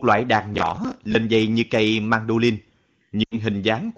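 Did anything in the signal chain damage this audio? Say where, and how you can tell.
Yes. Processor overload crackle from 0.55 to 1.15 s, just after "loại đàn" and ending before "dây như cây mandolin", points to the driver or buffer stage. For about 0.6 s a gritty tearing rides on the speech. Around twenty buffer deadlines were missed over that stretch, and each miss replayed a scrap of stale audio with hard edges. That rhythm fits buffers of roughly 10 ms.

Lost AMR speech frames from 3.24 to 3.38 s point to the network and radio link feeding the AMR-WB decoder. About 80 ms of speech drops to near silence within two frames, and the voice returns weak for a moment. That length fits a run of four 20 ms frames that failed their checks. The decoder reused its last good pitch and vocal-tract settings with shrinking gain, and the fade is quick because this is wideband coding.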